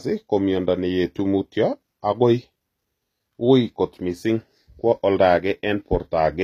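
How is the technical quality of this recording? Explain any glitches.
The recording has a clear, constant coding fault. Throughout, the treble sounds synthetic and s sounds come out gritty and lispy, likely from HE-AAC compression at a low bitrate, around 24 kbps. Only the lower spectrum is truly coded, and the upper bands are rebuilt from copies of it, so the harmonics fail to align. A spectrogram shows blocky, repeated high-band texture and nothing above 14.9 kHz.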